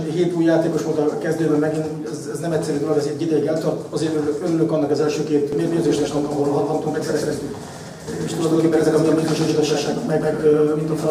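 From 5.52 s to the end, a doubled audio track: a second copy trails by about 150 ms at roughly equal level, likely from a slower capture path. It shows on the waveform and spectrogram as repeated, shifted shapes that begin abruptly.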